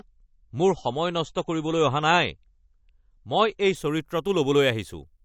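From the start until about 3.75 s, the speech has the classic sound of an adaptive stream starting at a low bitrate. Nothing reaches above about 7.9 kHz, so it's dull and a bit swirly, which fits a 32 kbit/s MP3 rung. The player was clearly buying a fast start before it had measured the connection. At 3.75 s it jumps, with no gap, to a much brighter, cleaner sound, consistent with stepping up to 128 kbit/s.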